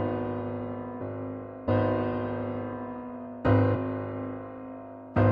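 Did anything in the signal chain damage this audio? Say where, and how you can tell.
Yes: damaged data in a compressed stream, at the codec decoding stage, at 1.0 s and 1.67 s. Each is a brief glitch, seen as a thin vertical discontinuity on a spectrogram and in the waveform. Corrupt bytes made the decoder misread frames, then resynchronise.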